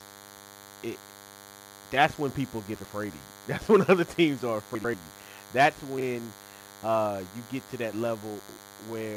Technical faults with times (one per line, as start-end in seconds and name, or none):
0.00-9.17 DECT cordless phone buzz
2.75-2.85 frames out of order
4.75-4.94 frames out of order
5.98-6.03 frames out of order
8.39-8.58 frames out of order